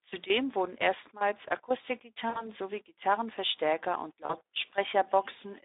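The clip is narrowband speech coded with the Speex codec. The audio is limited to about 200 Hz to 3.7 kHz, and it sounds plainly noisy and hoarse, which fits a low rate near 11 kbps. At that rate there are too few bits to model the excitation cleanly. VoIP packet loss concealed by the speech codec occurs at 2.29 to 2.49 s and again at 4.25 to 4.34 s. The missing audio, about 60 ms and 40 ms, fits three and two lost 20 ms frames. The decoder stretched the last sound to fill the gap and let it fade. The sound stays weak briefly afterwards.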